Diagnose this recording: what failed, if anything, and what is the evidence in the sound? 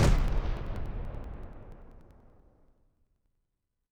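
The driver or buffer stage failed, with periodic USB or driver dropouts. From 0.09 to 3.83 s, regular ticks recur every 0.096 s. Each time, a few milliseconds of audio are skipped outright as a recurring background task stalls the USB bus or audio driver, about forty times in all.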